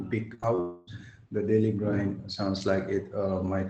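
From 0.34 to 0.60 s, repeated packet loss gives a choppy, robotic texture: short gaps up to about 31 ms are patched by extending previous sound, covering roughly a third of that span. From 0.60 to 0.88 s, a long network dropout is the likely cause of about 0.27 s of continuous concealment, where the last sound is stretched into a buzzy smear with no silence before the audio resumes.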